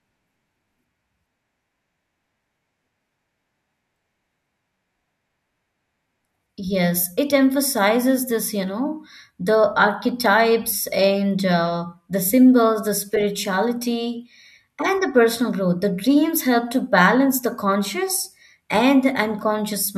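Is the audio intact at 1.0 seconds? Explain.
Yes, the speech at 1.0 seconds plays through intact, with no dropout, click, distortion or other fault at that moment.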